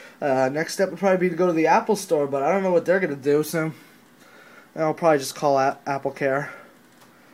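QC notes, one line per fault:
No faults found on this pass; nothing to log.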